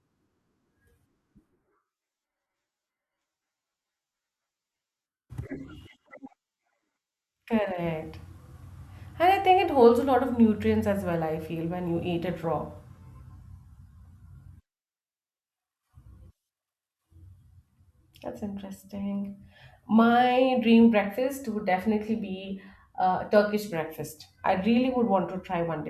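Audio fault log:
No faults are present in this speech recording.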